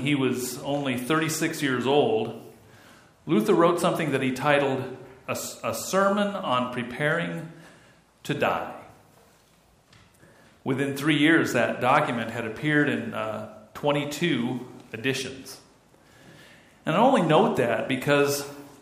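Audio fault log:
Nothing stood out on listening.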